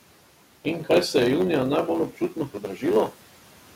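A block size mismatch (truncated) runs through the whole speech clip: one stage writes longer blocks than the next reads, consistent with 512-sample blocks, so each block's tail is discarded. That leaves a steady 100 Hz buzz and speech hurried about 1.07 times faster at roughly normal pitch, over room noise about 22 dB below the voice.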